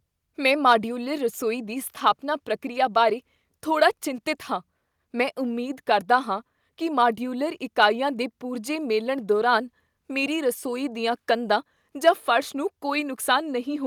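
At 4.08 s the speech and background drop in level together, by about 1 dB. The shift is sudden but slight. It sounds like a microphone volume step-down. The call software likely lowered the device's input volume in one step.

From 12.07 to 12.09 s a peak in the speech turns harsh and crackly. The waveform tops are flattened, overshooting by about 2 dB. This is microphone overload. The input volume was likely set too high, driving peaks past the converter's limit.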